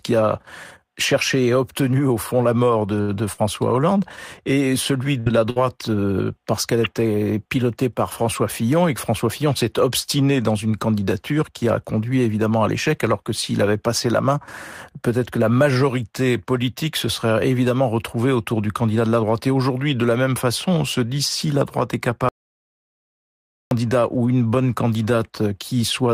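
At 3.01 s, right after "au fond la mort", a short stall from a late packet holds the last sound for about 68 ms, adding delay but losing nothing. Bursts of packet loss follow at 3.32–3.41, 5.20–5.29 and 5.50–5.59 s, the last just before "euh parce qu'elle était". Each drops about 60 ms, bridged by a fading continuation of the preceding sound. Between "évidemment retrouvée autour du" and "de la droite", at 18.82–19.02 s, a jitter buffer speed-up trims pitch periods to run at 115% speed, removing roughly 40 ms so the speech sounds hurried at unchanged pitch. From 22.29 to 23.71 s, an audio dropout to silence leaves 1.42 s of silence with no room tone, likely from a lost input signal.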